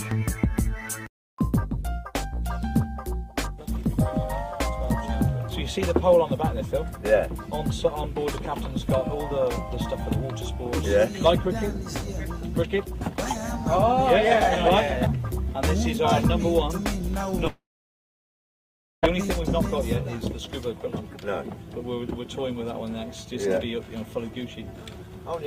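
From 17.47 s to 19.06 s the audio breaks off: the last sound briefly carries on as a fading buzz, then about 1.4 s of near silence follows before the audio resumes further along, with roughly 1.6 s of material simply gone. This is likely a long network dropout, where the receiver stopped getting data and concealment ran out. Unlike a brief packet-loss glitch, the gap is long enough to decay into silence, and the resumed audio skips ahead rather than continuing.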